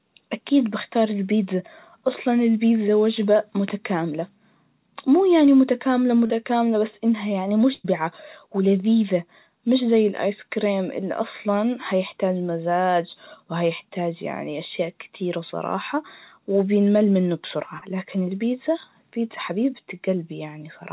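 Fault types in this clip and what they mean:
Short concealed packet loss: A little chunk of the call, about 40 ms, didn't reach the decoder in time, so the receiver papered over it by stretching out whatever sound came just before and then easing back into the real signal. You can catch it twice, at about 6.26 s and again at about 17.78 s. Each one is a quick smear or wobble lasting well under a tenth of a second, and a short sound right there can get swallowed.
Burst of packet loss: Here a longer run went missing, about 100 ms starting around 7.74 s and running to about 7.86 s. The receiver kept extending the last bit of sound across the whole gap, letting it fade as it went, and never dropped to silence. So you hear a held buzz or hiss instead of real content. When the audio picks up again it has skipped ahead, and that tenth of a second is simply gone.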